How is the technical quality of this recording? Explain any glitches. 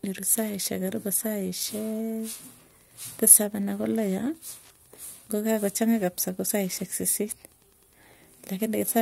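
The recording has one clear problem running the whole way through: Wi-Fi interference. A nearby Wi-Fi radio's beacon, sent every 102.4 ms, is being picked up and rectified by the audio circuit, giving a steady tick nearly ten times a second, sitting roughly 35 dB below the speech.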